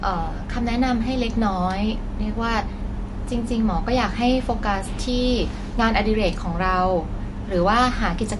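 Throughout, the speech sounds watery and swirly, with nothing above 11.3 kHz. The likely cause is MP3 compression at a starved bitrate, near 48 kbps.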